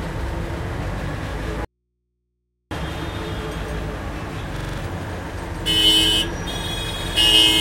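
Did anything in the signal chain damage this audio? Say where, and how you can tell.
Yes. Throughout, a second full-band copy trails the sound by roughly 150 ms at about equal level, with no decay: a doubled audio track, likely from a duplicated capture path.

From 1.65 to 2.71 s the sound cuts abruptly to faint mains hum far below the signal, an audio dropout to a faint residue, likely an analogue input that stayed live after the signal was lost.

From 4.57 to 4.78 s a 42.67 ms fragment repeats five times as a 23.4 Hz stutter. This system hang loop shows the hardware cycling its ring buffer after the driver froze, which fits a 2048-sample buffer.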